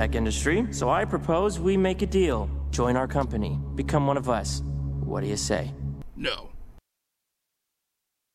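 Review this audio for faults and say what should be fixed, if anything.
Nothing here needs fixing, as there are no audible disruptions or defects anywhere in the audio.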